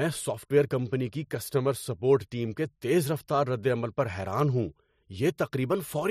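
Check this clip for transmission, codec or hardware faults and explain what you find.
Two bit error spikes occur. At 3.19 s, after "سپورٹ ٹیم کے تیز", and 4.40 s, after "ردعمل پر", a flipped bit makes a sample jump by a power of two and snap back. Each is a sharp broadband tick, a needle of one or two samples on the waveform and a thin full-height vertical line on the spectrogram.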